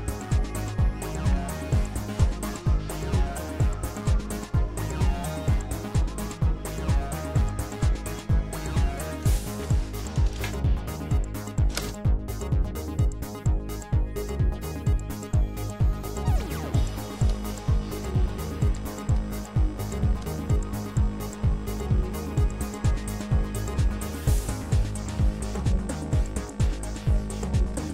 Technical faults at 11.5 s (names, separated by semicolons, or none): none